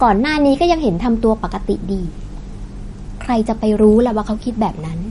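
From start to finish the speech has nothing above 10.6 kHz and a plainly audible watery, swirly texture. That's likely MP3 compression, with the encoder short on bits, trimming the treble and letting weak detail flicker, which fits a bitrate around 40 kbps.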